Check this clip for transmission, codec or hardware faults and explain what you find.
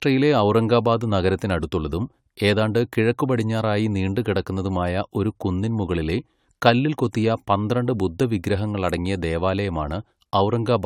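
One fault runs through the whole clip: generation loss. The speech sounds swirly, smeared and hollow across all of it. The likely cause is repeated AAC-LC decoding and re-encoding, perhaps four passes at a rate consistent with 96 kbit/s. Each pass quantises on a shifted frame grid, so errors accumulate and consonant attacks blur. On a spectrogram, nothing appears above 19.3 kHz, with smeared onsets below. The waveform shows softened transients.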